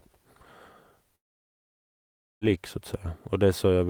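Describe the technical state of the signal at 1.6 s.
A long network dropout runs from 1.15 to 2.44 s, so at 1.6 s the signal is in the middle of the gap. About 1.26 s of speech is missing. The receiver extends the last speech sound as a brief fading buzz or hiss, then leaves near silence for almost the whole stretch, which is where 1.6 s falls. Speech resumes at 2.44 s without the lost portion, most likely because packets stopped arriving during that span.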